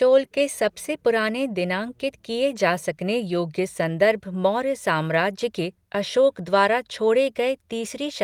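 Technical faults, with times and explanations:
No technical faults are audible anywhere in this speech.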